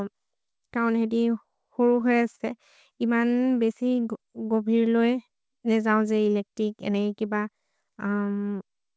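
At 2.36 to 2.42 s there is a short stall from a late packet: the jitter buffer ran dry, so the receiver held the current sound for about 42 ms until data arrived, then resumed without losing anything. The sound is briefly sustained, with a slight buzz or dip.

From 3.60 to 4.19 s a jitter buffer slow-down stretches the speech to about 93% speed by repeating individual pitch periods, adding 48 ms to rebuild the buffer's reserve. Pitch stays the same, but syllables drag. The band stops at 8 kHz throughout, which fits the G.722 codec on the call path.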